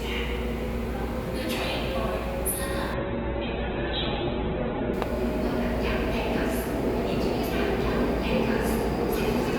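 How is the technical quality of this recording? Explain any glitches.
The recording has two faults: a steady hiss throughout and a two-second drop in quality early on.

Low bit depth with dither runs the whole length. The audio is held at a coarse resolution, which fits 8 bits, and dither noise was added before rounding so the error doesn't track the signal. Instead of grainy distortion, the result is an even, constant hiss sitting roughly 30 dB below the sound. It stays uniform whether the audio is loud or quiet.

Adaptive stream at a lower bitrate appears from 2.94 to 4.94 s. The stream switched down to a much cheaper encoding for that stretch, probably because the connection slowed, and the sound points to a drop from about 64 kbit/s to around 8 kbit/s in Opus. Everything above 4.2 kHz vanishes, so the audio turns dull, with more smearing. The change comes and goes abruptly, with no gap in playback.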